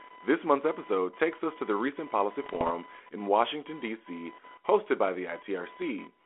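Computer activity noise runs through the whole recording as a fine buzzing chirp pulsing at about a kilohertz, sitting roughly 25 dB below the speech. Load shifts in the computer's processor, graphics hardware or mouse disturb the ground that the audio circuit shares, so this tone rises and falls with the machine's activity rather than with the talking. It stays present in the gaps between phrases as well as under them.

Bit errors on an ADPCM link strike from 2.44 to 2.73 s, just after "to the recent policy". The telephone band, about 300 Hz to 3.4 kHz with light coding roughness, fits a G.726 link at 32 kbit/s. Flipped bits in that stream knock the decoder's step size and predictor off track, so each error rings on for a few milliseconds as pops and rasping bursts with brief jumps in level. The damage points to an error rate of around half a percent.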